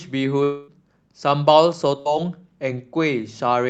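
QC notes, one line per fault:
0.43–0.71 s, long network dropout: the sound smears into a held, fading buzz or hiss for roughly a quarter second, then picks up further along with about 240 ms gone. This is likely a receiver concealing a network stall by extending the last sound instead of going silent.
2.00–2.08 s, burst of packet loss: a brief stretched buzz or hiss that dims over about 56 ms, then the audio jumps ahead, skipping about 60 ms. A short run of lost packets was filled by continuing and attenuating the preceding sound.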